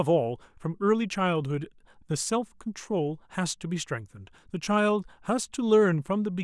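No technical faults can be heard anywhere in the recording; the signal stays steady and intact throughout.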